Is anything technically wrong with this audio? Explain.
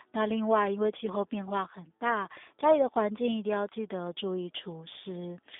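Yes. The speech runs through the G.729 codec for the whole clip. The sound is narrowband, confined to roughly 300 Hz to 3.6 kHz, with nothing above 3.7 kHz. The codec damage is plainly audible. G.729 does not send the waveform. It models a vocal tract filter and a pitch predictor, then adds a few pulses per frame. At 8 kbit/s this gives a rough, slightly synthetic quality.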